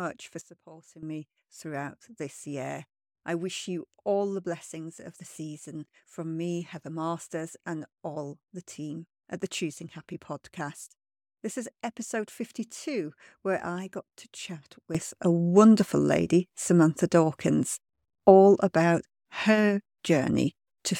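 At 0.41 s the level drops by about 12 dB in a single step and stays down until 1.03 s, just before "me throughout this year". From 14.95 s, after "I got to chat", it rises by about 12 dB and holds to the end. Each is a sudden gain jump. Speech and background noise shift together with no ramp, likely from a gain setting applied instantly between adjacent samples.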